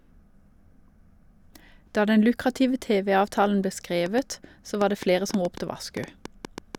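It's a speech clip, and from about 4.06 s to 6.76 s there's a train of clicks, around fifteen sharp, similar pops at an uneven pace of about 4.8 per second, roughly 10 dB above the speech. That's likely interference from nearby gear or a faulty connection or power supply.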